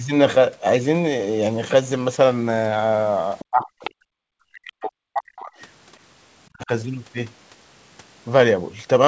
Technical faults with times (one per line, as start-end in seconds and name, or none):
3.39-3.45 other side's voice leaking through
3.50-5.52 speech suppressed in double talk
3.84-3.90 other side's voice leaking through
6.51-6.70 speech suppressed in double talk